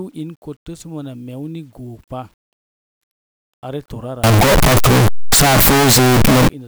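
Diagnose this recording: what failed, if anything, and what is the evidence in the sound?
Sample-format conversion likely read the 8-bit samples with the wrong signedness, a signed and unsigned mix-up that flips the top bit. From 4.24 to 6.49 s, after "are tor", the speech becomes very loud, harsh distortion, with quiet stretches as loud as everything else.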